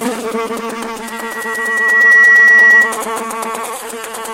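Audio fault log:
1.03–3.01 s, loudspeaker feedback squeal: a microphone is picking up the loudspeaker it drives, and around 1.9 kHz the gain round that loop climbs above unity, so each pass adds to the last. The result is a single piercing tone that swells over roughly a second before holding, standing about 15 dB above the rest of the sound, a shrill squeal that ends abruptly at 3.01 s once the loop is broken.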